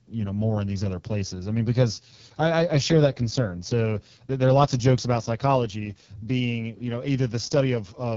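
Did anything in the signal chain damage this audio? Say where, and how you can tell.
Yes, at the codec stage: AMR wideband (HD Voice) throughout. The speech sounds rough and raspy, which points to its lowest rate, and nothing passes above 7.2 kHz. A narrowband codec would cut near 3.4 kHz instead.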